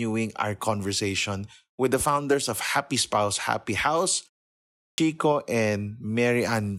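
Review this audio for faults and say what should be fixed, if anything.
Clipped start after a pause, 4.90 to 4.98 s. After a 0.7 s silence, the output wakes late and swallows the first 80 ms. Keep the output device awake through silence.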